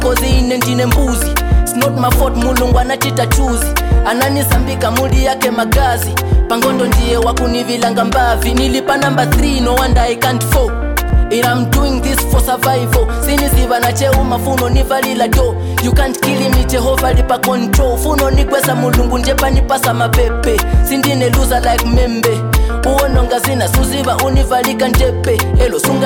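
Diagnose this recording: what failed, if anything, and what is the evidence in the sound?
The chunking stage failed: each block is cut about 6 s long but starts before the previous one ends, producing overlapping chunks. Roughly 6.5 ms of sound plays twice at each join, heard as a brief click or stutter at 5.09, 11.10, 17.11 and 23.11 s.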